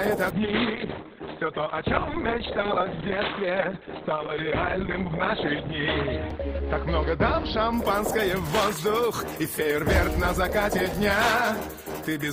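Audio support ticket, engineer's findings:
Call bitrate drop, 0.31 to 8.04 s: audio turns coarse and muffled, top end cut from 20 kHz to 4 kHz, worst for 4.9 s. Fits encoder starved from roughly 32 to 9 kbps.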